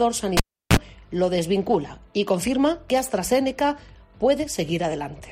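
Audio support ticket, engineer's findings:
Cable pulled and plugged in, 0.37 to 0.77 s: pop, 0.35 s near-silence, 36 ms 60 Hz buzz as tip reseats, second pop. Buzz separates it from plain dropout.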